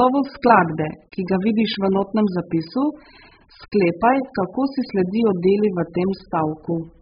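Speech with AAC compression likely throughout: nothing above 5 kHz, and a warbling, smeared texture on sibilants, which a plain low-pass filter wouldn't produce, points to a very low bitrate such as 8 kbps.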